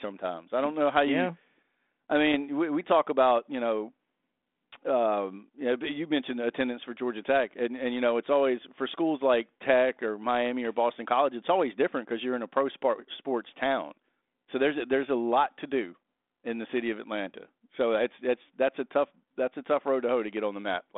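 At 2.32 to 2.34 s, just before "we we talk about", bit errors on an ADPCM link make a rough pop with a brief level change. Unlike a lost packet's silent gap, the flipped bits upset the decoder's step size and predictor, so the roughness rings on briefly.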